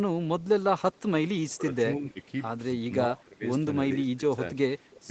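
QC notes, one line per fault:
0.96–1.0 s and 4.79–5.06 s, echo leak: a delayed copy of the sound trails the original by about 273 ms both times. It is roughly 40 dB under the direct signal in the first instance, and clearer in the second, roughly 25 dB under it. The cause is likely a far-end loudspeaker feeding back into its microphone, with the echo canceller failing to remove it, so the residue returns down the line as a faint, late repeat.
1.48–1.7 s, 1.97–2.26 s, 3.09–3.46 s, 3.95–4.4 s, speech suppressed in double talk: the speech level falls in four short stretches, each lasting a few hundred milliseconds. The drops are around 20 dB in the first and third, around 10 dB in the second and about 15 dB in the fourth. The likely cause is both sides talking at once, so the echo canceller cannot tell its own talker from loudspeaker echo and attenuates both.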